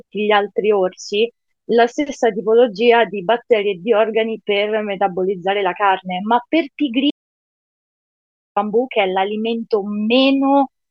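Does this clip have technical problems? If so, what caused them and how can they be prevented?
Yes. The audio input was likely lost, through a disconnected device, failed link or stray mute, while recording continued writing silence, producing an audio dropout to silence from 7.11 to 8.56 s. The speech cuts off mid-flow into total silence, with no room tone, and about 1.5 s of it is gone. Securing cables and links and monitoring input levels during recording prevents this.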